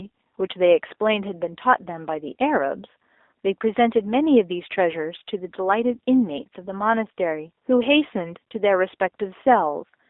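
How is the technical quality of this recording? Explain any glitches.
Technical quality is limited by one fault running through the whole clip: G.729 codec damage. The speech was squeezed through a low-rate VoIP coder, likely at about 8 kbit/s, that rebuilds it from a vocal tract model and sparse pulses, leaving a band of roughly 300 Hz to 3.7 kHz, with plainly audible roughness and a synthetic edge.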